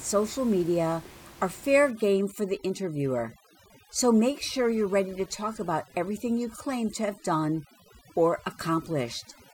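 From 1.91 s, right after "social media are fair", overdone noise removal kicks in to the end: bands near the noise floor get gated hard, leaving twinkly near-silence, and quiet parts of the voice go with them.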